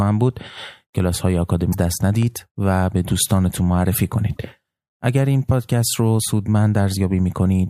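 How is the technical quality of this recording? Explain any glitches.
The recording has three audible glitches: two bursts of damaged data in a compressed stream and one brief block of digital silence.

The damaged-data faults sit at 1.69 to 1.75 s and 4.35 to 4.38 s. In each, the bytes reaching the decoder were corrupted, so it misread the affected frames and lost sync until it locked onto a valid frame header again. Each is heard as a short chirp, squawk, click or short hole of 50 ms and 30 ms respectively.

The block of digital silence falls at 2.23 s and lasts only about 0.67 ms, which fits a 32-sample block of zeros. It most likely came from an output buffer that was not filled in time. The audio drops out and returns with no fade, so the abrupt edges produce a tick or dip. A waveform shows a tiny near-flat stretch. A spectrogram shows a thin vertical broadband stripe.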